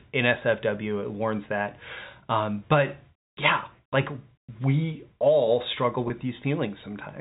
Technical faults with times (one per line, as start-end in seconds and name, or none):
6.08-6.10 packet loss with pitch repetition